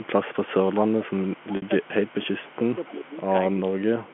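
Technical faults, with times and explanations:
Throughout, mains hum: a ground loop or nearby transformer is leaking the 50 Hz power line into the signal path, so a steady low tone with some low harmonics sits under everything, roughly 25 dB below the speech.
0.00 to 0.91 s and 1.25 to 3.53 s, echo leak: the far end is likely on a loudspeaker whose echo canceller let part of the returning signal through, so a faint copy of the speech trails it by 275 ms, roughly 30 dB down.
0.71 to 3.15 s and 3.55 to 4.12 s, speech suppressed in double talk: with both sides talking at once, the echo canceller likely mistook this talker for echo and turned it down. The speech dips and breaks up in pieces, by as much as about 25 dB, for roughly two seconds in all.
1.56 to 1.62 s, packet loss with pitch repetition: about 60 ms of audio went missing, which fits three 20 ms packets, and the receiver filled the gap by repeating the last pitch period. 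A brief held, buzzy tone fades out before the speech cross-fades back in.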